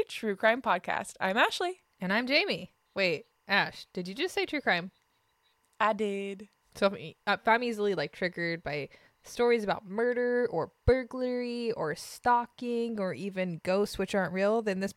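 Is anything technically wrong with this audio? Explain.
Yes. Timecode bleed runs from 1.36 s to the end of the clip. Linear timecode from a nearby track or cable has leaked into the speech path. The code is a square wave that flips between two tones, near 1 kHz and 2 kHz, as it encodes each bit. Its rate fits 23.976 frames per second. It sits far below the speech, but it stays audible as a faint, steady chirping warble behind the talking.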